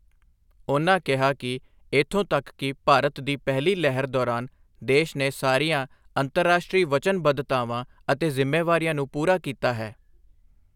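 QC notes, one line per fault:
No faults found in the speech. Nothing here needs a timed entry.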